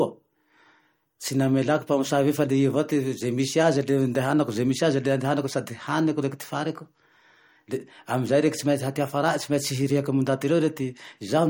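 From start to finish the speech carries MP3 compression, likely at a low bitrate in the region of 48 kbps. Nothing sounds above 17.3 kHz, and the damage is plainly audible as a watery, swirling texture where weak frequency lines drop in and out between frames. That flicker separates it from a simple low-pass filter, which would dull the treble but leave the remaining sound steady.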